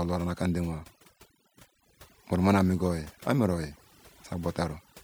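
Overdone noise removal runs throughout the speech: bands near the estimated noise are pulled down or off, leaving near-silent gaps with twinkling specks.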